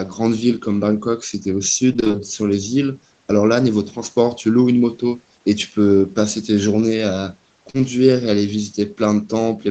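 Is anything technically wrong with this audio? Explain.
Yes, there are two packet-loss faults in this speech.

From 1.93 to 2.29 s there is repeated packet loss (robotic sound). Six gaps, none longer than 20 ms, removed about 120 ms of audio. The receiver patched each gap by extending the preceding sound, so nearly half of that stretch is synthetic. It comes out choppy, with fragments missing.

At 7.70 to 7.76 s there is a short concealed packet loss. About 40 ms of audio arrived too late or not at all. The decoder bridged the gap by continuing the last sound and then blending back into the real signal. The result is a brief smear or wobble rather than a clean dropout.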